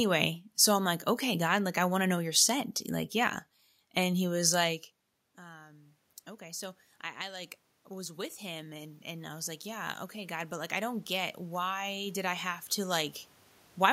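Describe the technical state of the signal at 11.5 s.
At 11.5 s the voice and the room noise are swelling together, part of a slow climb from 5.39 to 13.05 s after "he was like". This is automatic gain rising: the input fell by about 20 dB, and the gain control is lifting it by about 16 dB.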